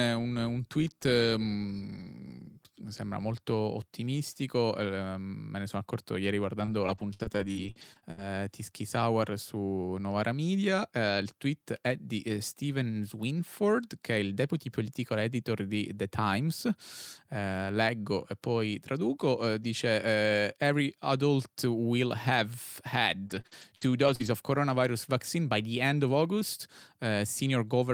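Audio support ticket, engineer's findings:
Repeated packet loss (robotic sound), 6.59–8.19 s, after "ne sono accorto ieri": choppy stutter. Holes up to 63 ms are each filled by extending the preceding sound, so roughly a fifth of the stretch is concealed. Receiver-side loss concealment.

Same fault, 23.27–24.27 s, before "of coronavirus vaccine by": fewer holes, longest 59 ms. A single dropout leaves one silent gap, but here holes recur in quick succession and each is patched rather than left silent.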